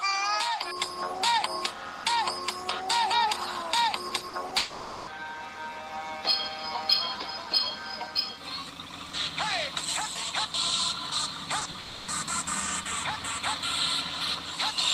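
From 4.09 to 4.53 s, repeated packet loss (robotic sound) sets in: four gaps, the longest about 40 ms, have 100 ms of audio in total patched by stretching the preceding sound, so roughly a quarter of that span is synthetic and comes out choppy.

Right after, from 4.57 to 5.09 s, half a second of sound is missing and the gap is bridged entirely by a continued copy of what came before, with no silence. The result is a fading buzz or hiss in place of the real audio, likely a long network dropout.

Around 11.59, 11.63 and 11.71 s, three bursts of short concealed packet loss each lose about 20 ms. The decoder fills each hole by extending the prior sound and blending back, which leaves quick smears or wobbles in close succession.

From 11.79 to 12.09 s, what is likely the same long network dropout pattern returns, shorter this time: 280 ms of audio is replaced by an extension of the previous sound, heard as a held, unnatural stretch before normal audio resumes with that portion gone.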